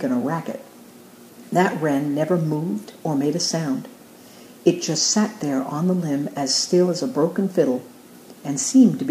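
No technical faults can be heard anywhere in the signal.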